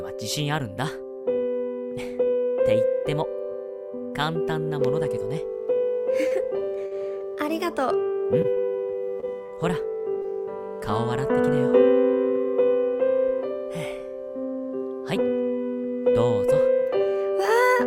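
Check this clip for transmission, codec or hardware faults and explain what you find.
Two kinds of network damage show up here, both from packets going missing in transit.

Short concealed packet loss hits twice, at 6.27–6.33 s and again at 10.22–10.26 s. Each time a few hundredths of a second never reached the decoder, so the receiver patched the hole by stretching out the last bit of sound, about 35 ms of fill in the first case and 17 ms in the second, before easing back into the real signal. You hear a quick smear or wobble, with a sliver of audio simply gone.

Repeated packet loss with a robotic sound covers 6.79–7.22 s and 8.42–9.50 s. The first stretch has four dropouts close together, the longest about 51 ms, and concealment fills roughly a fifth of it. The second has five shorter ones, none beyond 26 ms, with about a tenth patched. Because each hole gets filled from whatever came just before and the next loss follows almost immediately, the sound turns choppy, with some pieces missing outright.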